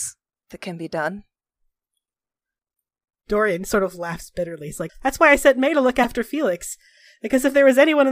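Damaged data in a compressed stream shows up at 0.50 s and again from 6.03 to 6.05 s in this speech: corrupted bytes make the decoder misread those frames and lose sync until it finds the next frame header, leaving a brief chirp or blip each time.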